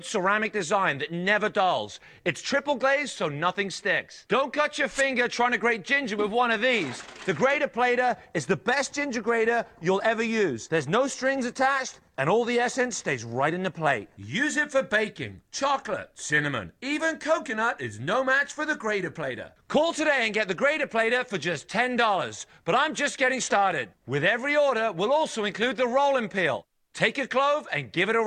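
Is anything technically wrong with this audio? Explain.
No, nothing is technically wrong with this audio.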